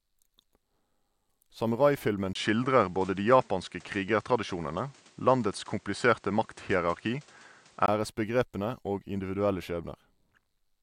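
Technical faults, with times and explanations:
2.33–7.88 s, input switched to a poorer device: after a brief gap of about 20 ms, the speech turns duller and changes level by about 5 dB. Nothing is present above 9.8 kHz, and a new noise floor appears about 35 dB below the signal. The likely cause is the recording input changing to a narrower-band microphone with its own gain and self-noise. The switch to the poorer sound comes just before "æresbegrepene og individuelle".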